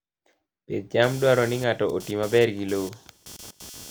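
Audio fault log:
1.03 s to the end, computer activity noise: a chirpy buzz pulsing roughly 300 times a second kicks in and sits about 20 dB under the speech, following the machine's load rather than the talker, since processor or mouse activity is wobbling the shared audio ground.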